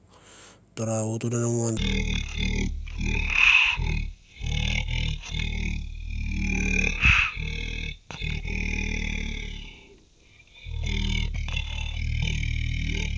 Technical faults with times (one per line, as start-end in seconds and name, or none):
1.77-13.18 wrong sample rate